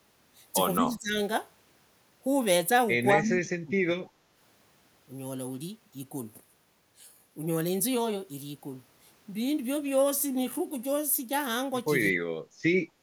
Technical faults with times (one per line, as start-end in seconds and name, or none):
0.78-1.16 speech suppressed in double talk
3.12-4.23 speech suppressed in double talk
12.12-12.43 speech suppressed in double talk
12.86-13.02 speech suppressed in double talk